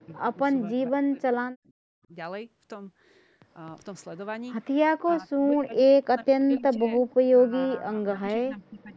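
The speech drops out in pieces from 0.0 to 0.39 s, 0.68 to 1.45 s and 1.63 to 2.12 s, then again from 5.0 to 6.92 s. At its deepest it falls by about 40 dB. This is likely speech suppressed in double talk: the far side spoke at once, and the echo canceller ducked both its own talker and the echo. At 7.09 s a brief echo leak appears. A faint copy, about 35 dB down, returns 467 ms late. It likely slipped past a loudspeaker's echo canceller. From 7.3 s to the end, suppression returns, shallower, around 20 dB.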